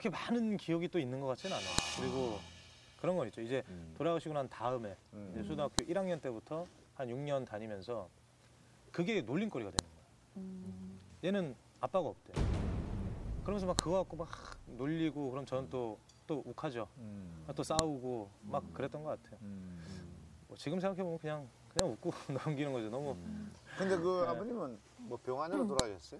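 Sharp snaps at 1.79, 5.79, 9.79, 13.79, 17.79, 21.79 and 25.80 s, every 4 seconds, are a file header played as audio: each joined piece's header bytes play as samples. The waveform shows thin tall spikes; the spectrogram shows matching broadband vertical lines.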